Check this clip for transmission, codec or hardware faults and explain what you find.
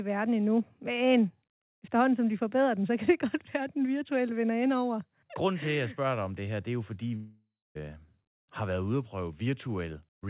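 One transmission fault stands out, a long network dropout. It comes through a phone-band call path whose sound stops near 4 kHz, which fits G.711 mu-law at 64 kbps.

From 7.16 to 7.78 s, just after "det er jo fordi", the speech breaks off. This is likely a long network dropout. About 600 ms of audio never arrived. The receiver stretched the last sound into a fading buzz or hiss for about 590 ms, leaving about 270 ms of near silence. Speech then resumes, with the lost part gone.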